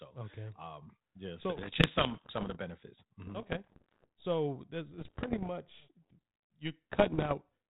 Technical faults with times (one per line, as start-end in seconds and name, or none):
1.57-2.57 bit errors on an ADPCM link
3.26-4.08 bit errors on an ADPCM link
4.94-5.48 bit errors on an ADPCM link
6.90-7.36 bit errors on an ADPCM link